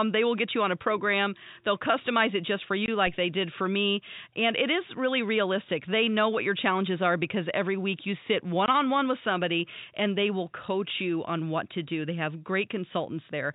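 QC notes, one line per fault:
2.86 s and 8.66 s, packet loss filled with silence: after "customize it just for", and between "week you sit one" and "on one with somebody", a 20 ms hole drops to dead silence with hard edges. This fits one lost 20 ms packet. Unlike concealed loss, nothing is repeated or smoothed over, and the narrow telephone band of the working G.711 coding continues unchanged on either side.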